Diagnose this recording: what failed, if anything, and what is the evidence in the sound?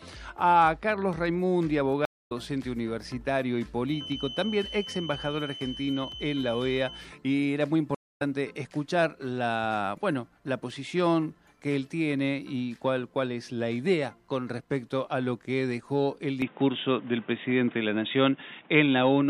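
Stream reconnect at the network stage: silences of 200 ms at 2.05–2.32 s and 231 ms at 7.95–8.22 s, each resuming a fraction of a second later as a fresh decoder restarts mid-stream.

Feedback whistle in the analogue path: a 3 kHz tone about 15 dB below the signal from 3.83 to 7.13 s, likely a loudspeaker-to-microphone loop held at its ringing threshold.

Input switched to a poorer device at driver level: from 16.42 s to the end, with no gap, nothing passes above 3.8 kHz, level shifts about 5 dB, and new noise sits about 30 dB down, likely another microphone or a headset's call profile.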